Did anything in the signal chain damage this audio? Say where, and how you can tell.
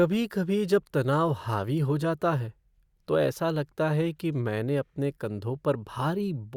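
No, nothing in the chain audibly damaged this speech.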